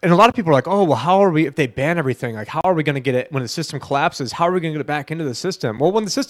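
At 0.32 s, 2.61 to 2.64 s and 5.77 s the speech drops out briefly, for about 19, 35 and 8 ms. These are gaps at a join of encoded pieces: separately encoded segments were butted together with their encoder delay and end padding left in. Each gap has smeared edges, and the speech resumes exactly where it stopped.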